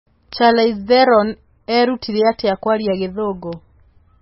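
The whole clip has that watery, swirly smear, with nothing above 5.6 kHz. That's likely heavy MP3 compression, which points to a very low bitrate of around 18 kbps. At 0.33 s and again at 3.53 s there's a single sharp tick: a bit error spike, where one flipped bit made a single sample jump and snap straight back.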